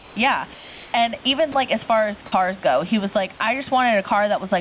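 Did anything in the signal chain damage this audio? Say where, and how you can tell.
Yes. The damage sits mostly in the call-processing stage around the sender's microphone and voice detector.

Gain pumping runs through the whole clip. The background rises in each gap and sinks under every loud passage, a swing of around 10 dB, so loud and soft parts sit unnaturally close in level. That breathing pattern is the likely signature of input gain set far too high, with a fast limiter or compressor clamping down on each peak and releasing in the pauses.

Comfort noise replaces the background from 0.00 to 0.16 s and from 0.54 to 0.94 s. In those stretches the real room sound, about 22 to 25 dB below the loud parts, gives way to a smooth, detail-free hiss about 2 dB quieter. The sender likely stopped transmitting during silence (discontinuous transmission), and the receiver synthesised noise shaped to resemble the room until sound resumed.

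Sound dropped by the voice detector occurs twice. At 1.52 s, just before "like as far as", a 20 ms sliver is replaced by steady noise. From 2.26 to 2.32 s, between "like as far as" and "go he was like", 60 ms is filled with noise and about 40 ms of real sound is lost. The detector likely mistook that sound for background and muted transmission until it triggered again.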